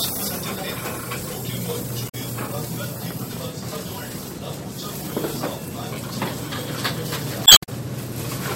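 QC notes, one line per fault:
2.05–2.15 s and 7.43–7.69 s, damaged data in a compressed stream: a short glitch cuts into the sound each time, the second one longer at about a quarter second. Corrupted bytes make the decoder misread frames, lose sync and search for the next valid frame header.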